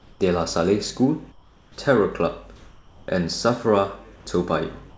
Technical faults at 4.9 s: comfort noise in place of the background

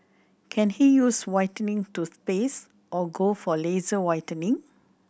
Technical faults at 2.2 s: none

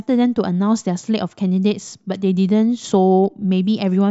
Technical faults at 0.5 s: none

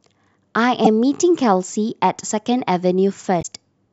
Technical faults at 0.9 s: damaged data in a compressed stream

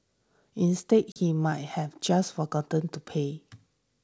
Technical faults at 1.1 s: packet loss on an ADPCM call

